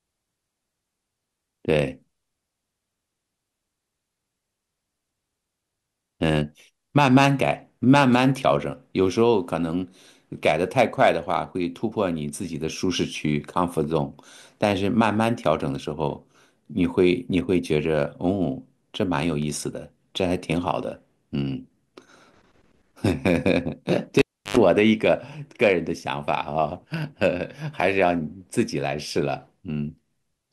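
From 19.21 to 19.64 s the speech carries CD scratch ticks: three brief clicks, the longest only around a millisecond. A blemish on the disc wipes out more data than error correction can repair, and it comes back under the laser on each revolution, so the player patches or mutes a tiny run of samples each time. On a waveform each tick is a hairline spike or notch; a spectrogram shows thin vertical broadband lines.

At 24.19 s comes the cable pulled and plugged in. A pop marks the break, then the signal falls to near silence for about 0.33 s while the connection is open. As the plug goes back, a 90 ms burst of 50 Hz mains buzz appears with only the tip making contact, and a second pop brings the sound back at 24.57 s. The waveform shows a spike, a flat gap, a dense hum band and another spike. The spectrogram shows vertical flashes at each end and stacked 50 Hz harmonics in between.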